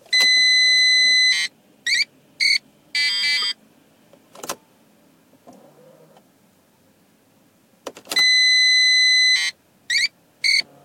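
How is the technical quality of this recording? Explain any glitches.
Two brief glitches mar this everyday-sound recording. At 2.40–2.42 s and 3.42–3.44 s, a corrupt frame was decoded: flipped bits in a single compressed frame misplaced energy, producing a short, fairly loud chirp, squeak, blip or burst of noise.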